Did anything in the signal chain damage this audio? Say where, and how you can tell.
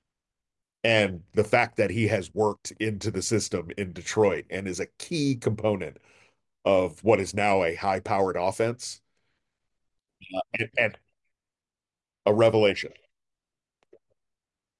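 No, nothing along the chain seems to have harmed this speech recording, so there's no stage to point to and nothing to chase down.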